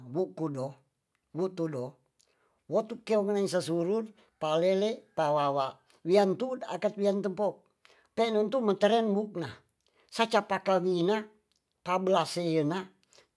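Nothing stood out on listening to the speech in this recording.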